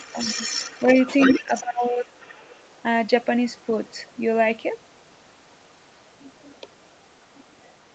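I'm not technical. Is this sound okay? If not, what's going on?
No. From the start to 1.39 s there is other side's voice leaking through: a second voice sits under the speech, fairly quiet. It comes back briefly from 1.55 to 1.62 s, and again, much fainter, from 2.06 to 2.74 s. This is likely a call where the far end was playing on a loudspeaker, and the echo canceller failed to scrub all of it from the microphone pickup.

From 1.39 to 2.07 s, for roughly 0.7 s, there is speech suppressed in double talk. The talker's own speech drops sharply in level, just as the leaked voice overlaps it. With both sides talking at once, the echo canceller likely could not tell its own talker from the echo, so it turned everything down together. The call processing also keeps the sound below about 8 kHz, which is normal for a call.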